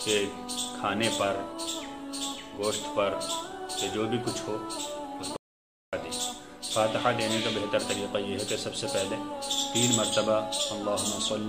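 At 5.36 s the audio cuts to digital silence for about 0.56 s, until 5.93 s: an audio dropout to silence, likely a lost input link, with no room tone remaining.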